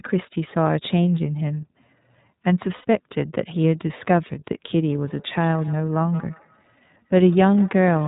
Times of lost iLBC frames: 2.75-2.85

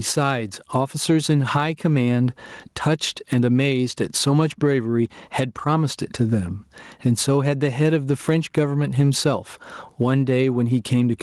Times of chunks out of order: none

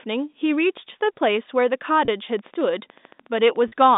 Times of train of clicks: 2.39-3.94

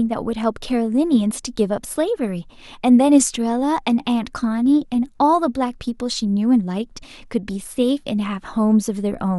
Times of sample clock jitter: none

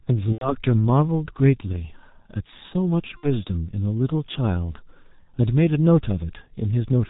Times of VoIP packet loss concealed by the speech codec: 0.32-0.55, 3.17-3.28

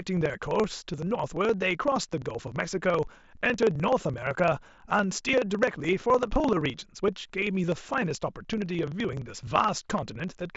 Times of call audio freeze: none

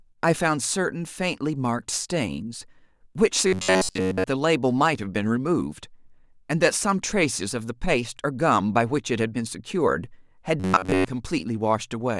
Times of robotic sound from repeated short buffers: 3.47-4.24, 10.60-11.06

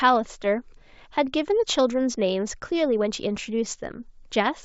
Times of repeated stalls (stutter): none

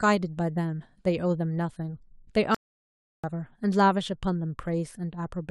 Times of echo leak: none

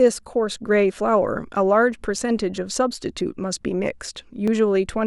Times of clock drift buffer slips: 0.67-4.48

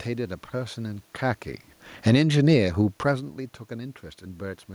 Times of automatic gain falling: 1.92-2.30

